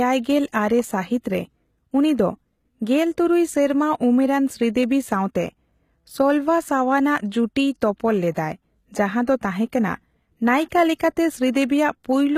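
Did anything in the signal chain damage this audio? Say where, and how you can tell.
Yes. The codec stage is the likely culprit: HE-AAC compression at a low bitrate, around 20 kbps. Throughout, the treble is rebuilt from copied lower bands rather than coded, so sibilants sound gritty and metallic, and nothing remains above 14.9 kHz.

Pre-echo, also from the codec, appears at 8.34 to 8.36 s (spread about 21 ms) and at 10.99 s (about 12 ms). Quantisation noise spread across a transform block bleeds ahead of sharp onsets, so a brief hiss precedes each attack and softens it.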